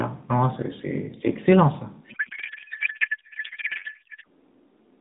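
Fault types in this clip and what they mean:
Codec payload misread: from 2.10 s to 4.26 s the decoder unpacks the AMR frames with their fields in the wrong bit positions, which points to octet-aligned packing being read as bandwidth-efficient. The speech becomes garbled noise and warble that barely follows it.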